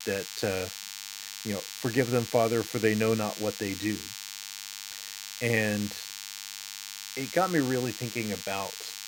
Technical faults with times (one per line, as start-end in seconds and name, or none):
0.00-9.07 DECT cordless phone buzz